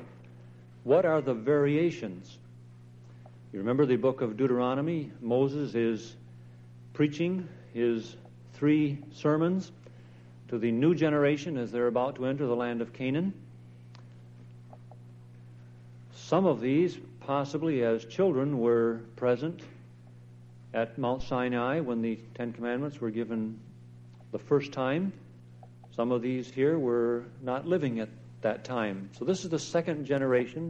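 At 21.20 s, a supply was switched on or off on the live input and its step passed through the coupling capacitors, giving a phantom power thump: a deep thud peaking at about -26 dBFS that dies away within roughly 50 ms, ending by 21.42 s.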